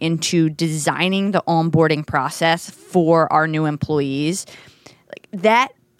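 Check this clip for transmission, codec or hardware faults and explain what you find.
One fault is present: clock slip clicks from 0.12 s to 5.99 s. A single sample is dropped or repeated about every 50 ms, around a hundred times, likely from two unsynchronised clocks drifting apart by around 400 ppm. The slips come fast enough to be heard as a soft, regular rattle.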